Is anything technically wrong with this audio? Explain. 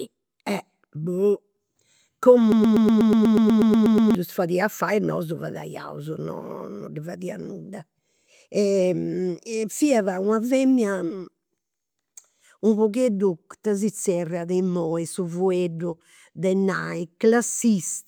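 Yes. From 2.52 to 4.15 s the speech sticks in a broken-record loop. A 122 ms fragment repeats exactly, back to back, about 13 times. It stutters mechanically. The likely cause is a stalled player or stream resending its last buffer. Normal playback resumes at "fadia fai e nosu".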